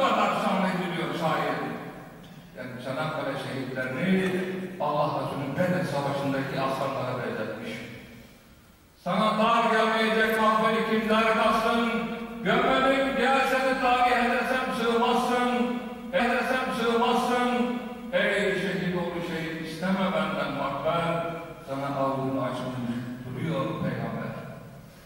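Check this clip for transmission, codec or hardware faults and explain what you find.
One fault is present. Stream segment repeated at 16.19 to 18.18 s: the player queued the same segment twice, so about 2.0 s of audio replays, with a small blip at the jump back.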